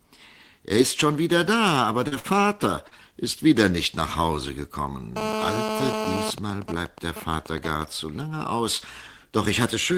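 At 2.07–2.14 s, 2.19–2.27 s and 2.88–2.94 s there is short concealed packet loss. Each time about 40 ms of audio arrived too late for the decoder, and the receiver extended the preceding sound to bridge the gap. Each repair is a brief smear or wobble before the real signal resumes.

From 5.17 to 6.31 s, GSM phone buzz appears. A nearby 2G handset in an active call transmits in bursts 217 times per second, and the audio circuitry rectifies them. The result is a hard, raspy, harmonic-rich 217 Hz buzz at about 3 dB below the signal.

From 6.38 to 7.82 s, GSM signalling bursts follow. They are consistent with a nearby phone transmitting only intermittent burst groups while its user stays silent in the call. These rectified pulses produce even ticks with a longer 217 Hz buzz twice a second, roughly ten decibels below the signal.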